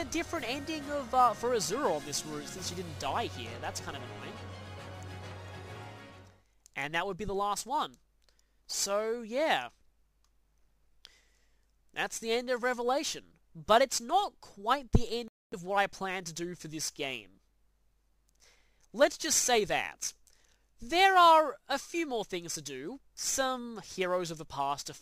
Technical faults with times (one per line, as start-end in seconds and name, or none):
15.28-15.54 Bluetooth stall